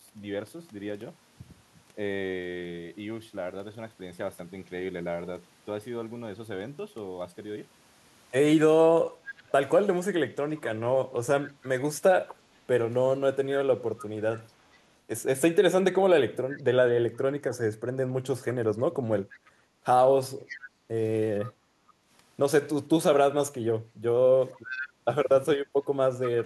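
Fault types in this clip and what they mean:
Speech suppressed in double talk: the voice dips in brief patches, by about 15 dB at worst, likely the echo canceller turning down this side's talker along with the loudspeaker echo; waveforms show abrupt envelope notches.
Echo leak: a faint copy of the voice returns 479 ms later, likely loudspeaker echo the canceller missed; spectrograms show delayed, fainter repeats of the speech harmonics.
Background gated by the echo canceller: the canceller clamps the microphone, dropping room sound by about 9 dB; the noise floor visibly notches, then recovers.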